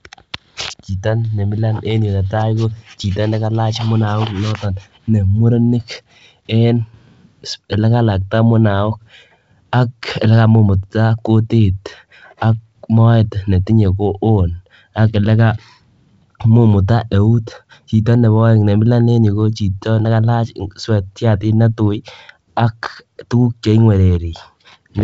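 Nothing stood out on listening to this speech, which comes over G.722 wideband telephone coding at 56 kbit/s with no content above about 7.8 kHz.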